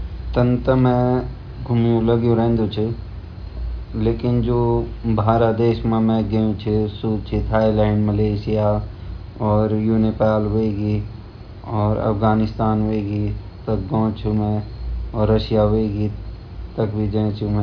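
A speech recording in which no technical fault can be heard at any point in the signal.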